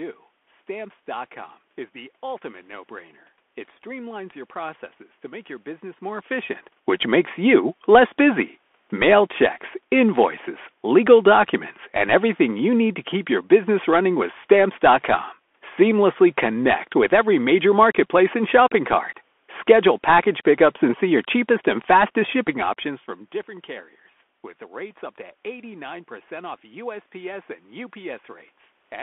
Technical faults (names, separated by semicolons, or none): Bluetooth CVSD headset codec